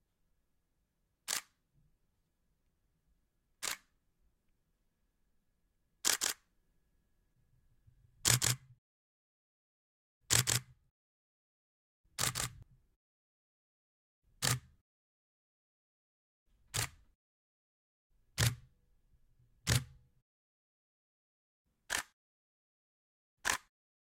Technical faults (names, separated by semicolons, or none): doubled audio track